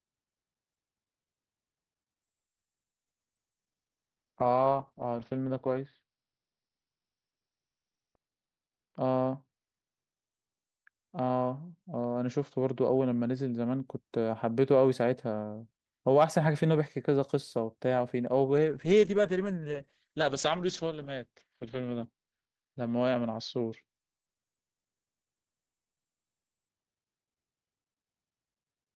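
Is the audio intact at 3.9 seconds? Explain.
No. At 3.9 seconds the speech sits inside a call bitrate drop that runs from about 2.22 s to 13.91 s. The call's bandwidth estimate fell and the encoder was pushed from 48 kbps down to 8 kbps, holding the lowest rate for about 2.85 s. At that rate the codec quantises coarsely and narrows the audio band from 20 kHz to 6 kHz, so the sound turns muffled and rough until the bitrate recovers.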